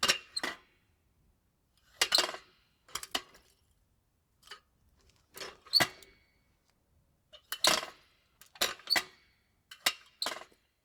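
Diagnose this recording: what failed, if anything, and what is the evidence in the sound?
Nothing failed; no fault is audible anywhere in this recording.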